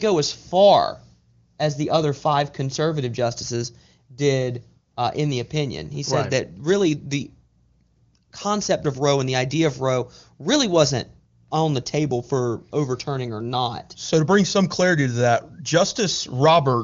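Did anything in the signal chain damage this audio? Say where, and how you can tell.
No, the chain left this speech undamaged; it goes through an AMR wideband (HD Voice) codec path with nothing above about 7.3 kHz and little or no audible coding roughness, which fits the top 23.85 kbit/s mode.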